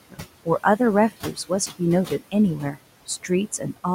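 Throughout this speech recording, the background sinks in the gaps and creeps back up under the talking. These are noise suppressor artifacts: the processor pulls down bands it judges to be steady noise by about 17 dB, frame by frame, against room noise sitting about 16 dB below the speech. Between 1.23 and 1.51 s part of the speech itself goes faint and swallowed, dipping by up to about 14 dB over roughly a tenth of a second in total. That is speech cut by the noise suppressor, which mistook those quieter speech components for background and turned them down along with it.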